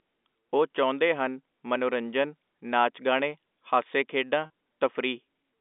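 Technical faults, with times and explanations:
4.46–4.50 s, packet loss with pitch repetition: about 40 ms of audio goes missing, which fits two lost 20 ms packets. The receiver fills the gap by repeating the last pitch period, so the speech briefly holds on a slightly buzzy tone before a short cross-fade back.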